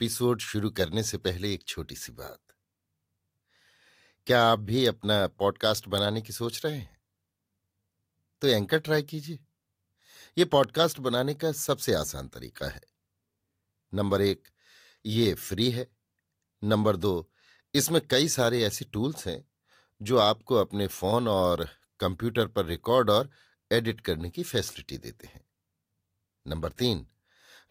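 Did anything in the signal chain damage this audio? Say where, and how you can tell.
Yes: sharp snaps at 5.98 s and 10.64 s, peaking at about -15 and -20 dBFS, are electrical switching spikes, likely nearby arcing picked up in the analogue wiring.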